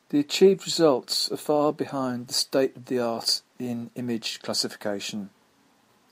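No technical faults can be heard anywhere in this speech recording. There is nothing to place in time or describe.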